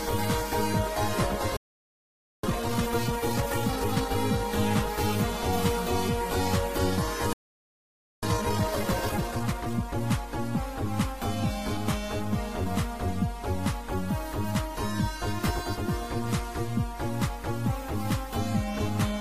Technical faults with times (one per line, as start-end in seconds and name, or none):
1.57-2.43 playback stall
2.43-4.15 time-compressed catch-up
7.33-8.23 playback stall
8.23-10.01 time-compressed catch-up